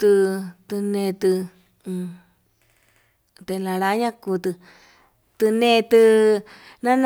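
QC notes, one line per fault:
No fault found; nothing to log in these QC notes.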